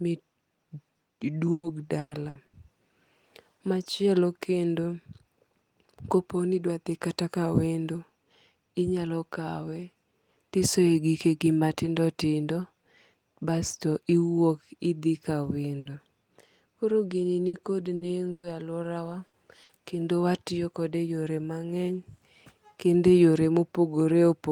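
Between 1.51 and 2.56 s of this speech recording, packets were repeatedly lost or arrived late. Four gaps, the longest 120 ms, were each filled by extending the preceding sound, so about a third of that stretch is patched, and this repeated packet loss gives it a choppy quality with pieces missing. Later, short bursts of packet loss at 15.79 s (just after "idhi ka"), 17.47, 17.95, 18.31, 19.27 and 19.63 s (both just before "kendo watiyo") drop 60 ms each, and 120 ms at 18.31 s. Each hole is covered by a fading continuation of the last sound, heard as a brief held buzz or hiss before the audio jumps ahead.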